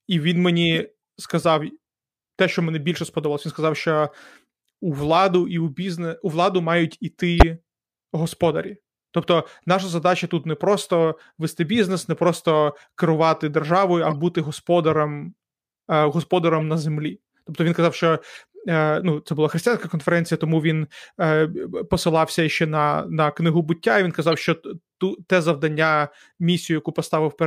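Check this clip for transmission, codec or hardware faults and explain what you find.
A codec fault is present: corrupt frame decoded, at seven points. Damaged compressed frames were played anyway, so misread gains spread energy at the wrong frequencies, giving brief chirps and noise bursts. They occur at 0.74–0.77 s; 2.96 s; 7.40–7.43 s, after "бізнес у владу мають", the loudest; 14.10–14.13 s, between "просто керувати державою а" and "бути господарем е"; 16.59–16.63 s, before "на землі"; 18.35–18.44 s, the longest and faintest; and 24.32–24.34 s.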